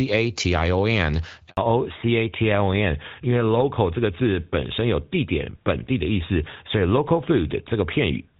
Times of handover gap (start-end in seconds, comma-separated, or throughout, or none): 1.49-1.57